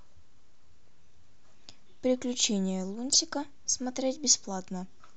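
A short burble at 0.88 s, then a longer burble from 3.12 to 3.15 s: DAB burbling. Weak reception let bit errors of a fraction of a percent reach the MP2 data, putting short blips of noise in single sub-bands.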